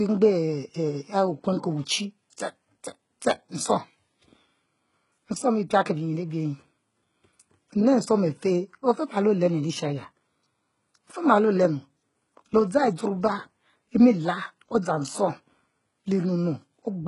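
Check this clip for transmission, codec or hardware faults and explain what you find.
One codec fault runs through the whole clip. HE-AAC compression throughout: the treble stops at about 11.1 kHz and is likely rebuilt by spectral band replication from copied lower bands, with heavy damage that fits a bitrate near 12 kbps. The s sounds come out gritty, metallic and lispy.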